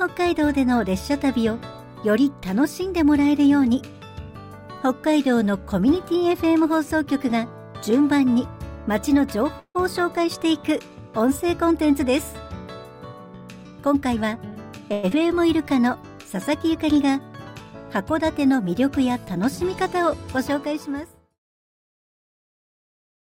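At 9.59 s the sound stalls for about 0.17 s in what is likely a call audio freeze: packets arrived late and the jitter buffer ran dry. The receiver stretches the last sound into a fading buzz that dies to silence for about 80 ms, then playback resumes exactly where it paused. Nothing is skipped; the full 153 ms is simply inserted, pushing everything after it later. That distinguishes it from a dropout, where material goes missing.

From 13.12 to 14.53 s a jitter buffer speed-up runs the sound at about 111% of normal rate while the pitch stays put. The buffer was holding more than its target, so the receiver trimmed many small pitch-period-sized slices in succession, roughly 150 ms in total. It sounds hurried rather than chopped, with no gaps and no pitch rise, which sets it apart from simply playing the audio back too fast.

At 14.93 s comes what is likely a long network dropout lasting about 0.2 s. 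No audio reached the receiver, so it extended the last sound as a decaying buzz for 180 ms without ever reaching silence. When playback picks up, 80 ms of material has been lost outright. Unlike the earlier freeze, the sound jumps ahead on return instead of continuing seamlessly.

Straight after, from 15.15 to 15.69 s, a jitter buffer slow-down pulls the rate down to about 90% at unchanged pitch. To rebuild its reserve, the receiver repeated single pitch periods or bits of pauses, adding 57 ms overall. Sounds come out drawn-out. It is the mirror image of the speed-up, and lacks the buzzy concealment of the two stalls. The smooth fade-out ending at 21.4 s is heard as an editor's fade.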